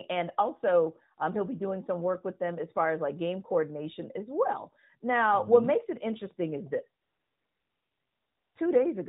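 At 7.02 s the phone decides the talker has gone quiet and stops sending speech frames for about 1.54 s, until 8.56 s. That's AMR comfort noise. The receiver fills the gap with synthetic hiss built from a rough sketch of the background's level and spectrum. So the real room sound drops out and a smooth, steady noise switches in, then switches back out when speech frames resume. All of it sits inside the narrowband AMR codec's 4 kHz ceiling, with only light coding damage to the speech, which fits its top 12.2 kbps mode.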